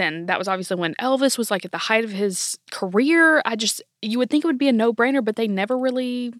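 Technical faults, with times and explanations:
2.78 s and 4.85 s, bit error spike: after "the height of his" and between "it would be a" and "brainer but", a single corrupted sample jumps to about -23 and -29 dBFS, giving sharp broadband ticks.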